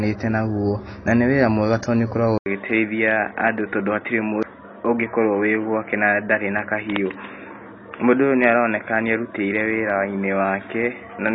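Speech runs through what is likely AAC compression at a low bitrate, pointing to around 24 kbps AAC-LC: nothing survives above 6.6 kHz, and the coarse spectral quantisation leaves plainly audible damage, a dull, smeared tone with a warbling, fizzy edge on sibilants. At 2.38 s the input likely switched to a poorer device, and the pickup gives way through an 80 ms silence to a narrower channel that passes nothing above 3.8 kHz, so the sound turns boxy and muffled to the end while the level barely shifts and a faint new noise floor sits far below the speech. At 4.43 s a CD skip makes the player jump to another point on the disc's spiral, heard as a very brief mute and a sudden jump in the audio.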